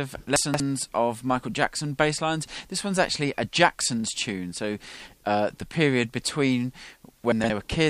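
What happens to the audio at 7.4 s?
Chunks out of order, from 7.32 to 7.5 s. In this stretch the audio was handled in blocks of about 60 ms, and one of those blocks arrived or was written two blocks late. It therefore plays after the two chunks that should have followed it. No sound is missing, but the sequence is shuffled, so the moment comes across as a brief jumbled stutter, with three hard joins where mismatched chunks meet.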